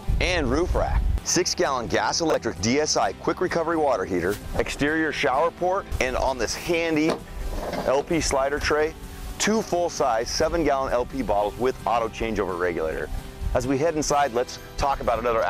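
Two spots in the audio have chunks out of order. Around 2.30 to 2.34 s, a 20 ms chunk turns up one slot late, and from 12.92 to 13.0 s another lands three chunks behind where it belongs. Nothing's missing, just reshuffled, so each spot gets three hard joins. You hear a quick jumbled stutter, and the second one is longer.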